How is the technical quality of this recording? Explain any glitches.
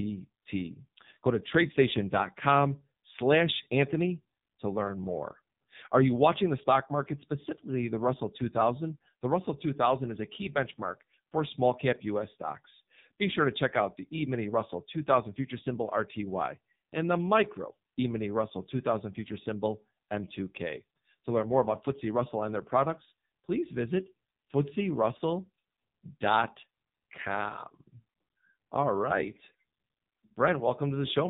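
Quality is poor: the whole recording has passed through the AMR narrowband mobile codec, with heavy damage.

Throughout the speech, everything above 4 kHz is missing, and the voice sounds buzzy and synthetic, which fits AMR-NB's low 5.9 kbps mode. Each 20 ms frame rebuilds the voice from a vocal-tract model driven by sparse pulses. On a spectrogram, energy stops flat at 4 kHz and harmonics look smeared.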